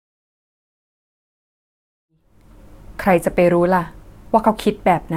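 No technical faults can be heard in this speech.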